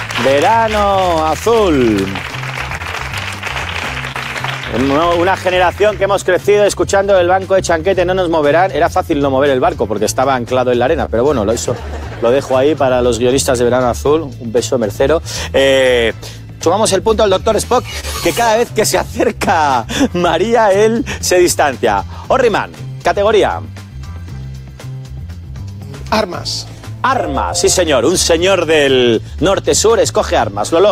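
The sender's audio clock runs slower than the receiver's, by roughly 2 percent, so this is clock drift between sender and receiver. The jitter buffer keeps running low, and the receiver has to pad the stream to keep it from emptying. The result runs through the whole recording as faint, unevenly spaced timing hiccups rather than one obvious break.

Those repairs show up as repeated timing corrections from about 0.29 s to 30.87 s. The receiver keeps stretching the audio with small repeated pieces, so playback runs at about 99 percent speed. Across the clip this adds roughly 0.4 s. Each edit is tiny, so it reads as a slightly unsteady, dragging tempo with occasional soft stutters, always in the same lengthening direction.

On top of that come scattered short gaps, where single packets were lost or arrived late and the receiver filled each hole by extending the last sound. They cluster in five stretches: 0.07 to 6.03 s, 11.05 to 14.30 s, 17.08 to 18.96 s, 21.25 to 24.56 s, and 27.25 to 30.54 s. 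Each stretch has a handful of patches, the longest about 15 to 30 milliseconds. Only a small share of each stretch is concealed, so the sound stays clear but picks up brief ticks and smeared moments.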